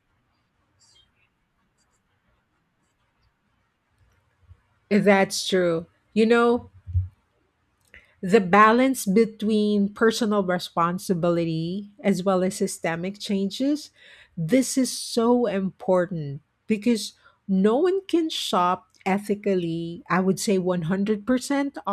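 No technical faults can be heard in the recording.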